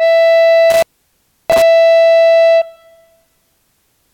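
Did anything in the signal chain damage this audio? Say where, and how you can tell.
Yes: an intermittent contact in the analogue wiring. Between 0.70 and 1.62 s the music drops out for about 0.67 s in total, with crackle where the connection makes and breaks. On a waveform it shows as a near-flat gap bracketed by spiky transients. A spectrogram shows broadband vertical streaks at the edges and only a faint hiss floor in between.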